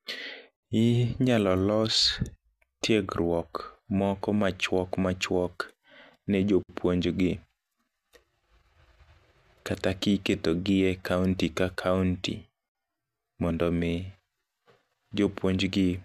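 Separately encoded pieces of this speech were joined untrimmed, leaving encoder delay and end padding in, so a gap at a join of encoded pieces recurs every 6 s: silences at 0.56–0.63 s (68 ms), 6.63–6.69 s (60 ms), and 12.69–12.75 s (60 ms) after "e kaunti ka kaunti", each with smeared edges, then resuming.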